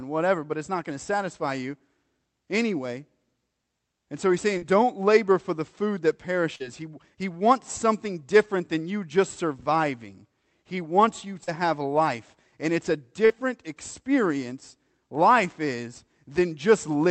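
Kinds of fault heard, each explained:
Short concealed packet loss: four times, 40 ms of the speech never reached the decoder in time, and the receiver bridged each gap by extending the preceding sound before blending back, leaving brief smeared or wobbly moments, for instance just after "for the food that" and "it's a".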